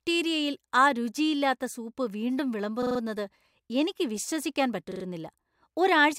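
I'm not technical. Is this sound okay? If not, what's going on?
No. Repeated frames at 2.82 to 2.99 s and 4.91 to 5.03 s: a tiny 43 ms piece of speech replays several times in a row, causing a brief stutter.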